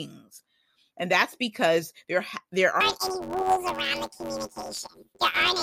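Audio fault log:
2.81–5.62 s: planar audio read as interleaved. Each 10.88 ms block, stored as all left then all right samples, is played as alternating pairs, so both halves run at double speed in turn. Blocks this short give a robotic 91.9 Hz buzz, with no clear octave jump.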